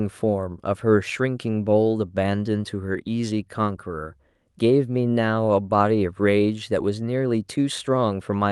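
No technical fault can be heard anywhere in the speech recording; the signal stays continuous and stable throughout.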